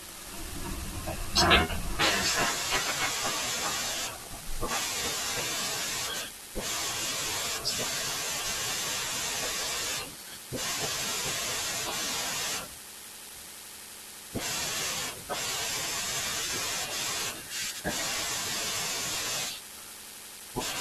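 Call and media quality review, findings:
Block size mismatch (padded), throughout: steady buzz at 46.9 Hz over the speech. Buffer handoff between stages; the writer fills less than each 1024-sample read, and the remainder is zero-padded, giving a short gap per block. Playback runs marginally slow (0.999x), timbre unchanged.

Compressed frames skipped, 0.51 s: audio jumps ahead about a tenth of a second. Decoder/input stage; whole compressed frames are dropped.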